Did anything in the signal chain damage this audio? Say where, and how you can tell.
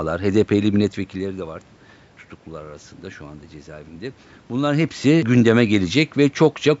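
No, nothing in the chain damaged this speech: the lowest bass is trimmed, as normal call microphone processing does; the room noise underneath belongs to the recording; and the level changes around 1 s and again around 4.5 s are the talker moving relative to the microphone, not a system fault.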